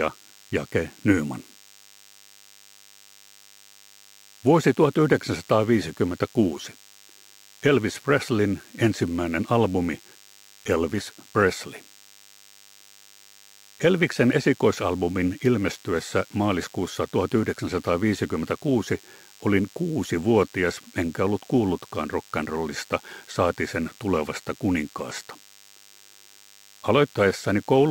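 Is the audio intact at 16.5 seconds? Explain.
No. At 16.5 s a thin, steady buzz at 100 Hz with many harmonics sits about 30 dB below the sound throughout: DECT cordless phone buzz, a nearby handset's 10 ms radio bursts rectified by the audio circuit.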